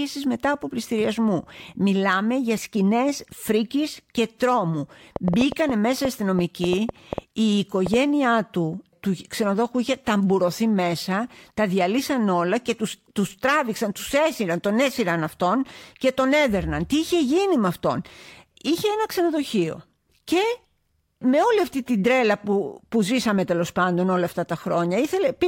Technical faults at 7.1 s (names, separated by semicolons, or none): train of clicks